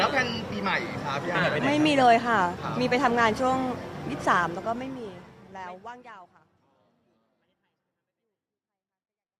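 No technical faults can be heard in this audio. The level eases down in a smooth fade-out beginning around 4.5 seconds and reaching silence at 9.4 s, with no click or hard edge at the close.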